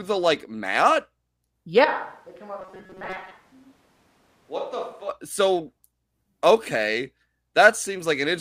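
A speech recording whose sound turns roomy, hollow and thin from 1.85 s to 5.09 s, dropping roughly 10 dB with room noise sitting around 30 dB below the speech. This is most likely a switch to a distant microphone. The sudden change at both ends, together with the added room tone, sets it apart from a gradual equalisation or level change. Inside that stretch, from 2.60 s to 3.32 s, the sound becomes a rigid metallic buzz at 188 Hz that still loosely tracks the speech. This is robotic sound from repeated short buffers. A fixed pitch at that rate fits a block of about 5.3 ms being repeated while most of the real audio is skipped, likely because new audio arrived too late. That fixed pitch distinguishes it from ordinary dropouts or codec warble.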